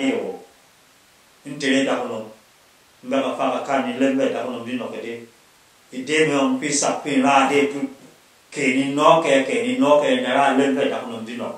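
No technical faults can be heard anywhere in the recording.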